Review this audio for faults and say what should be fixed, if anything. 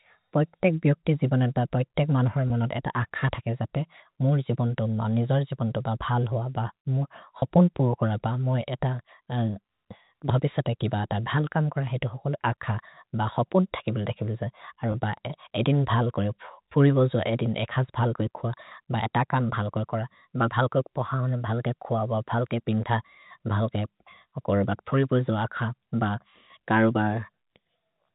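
Packet loss with pitch repetition: audio packets went missing at 2.48 s (just after "जिबनत् ब पैतेक् मनोहर्"), 7.40 s (just before "हपुन् पुर् कोर") and 14.92 s, each gap about 20 ms, which fits one lost packet. The receiver filled each gap by repeating the last pitch period, so the speech briefly sounds held and buzzy. The G.711 telephone coding, limited to 4 kHz, is not a fault. To prevent the loss, add a jitter buffer with forward error correction or redundant packets, and improve network reliability.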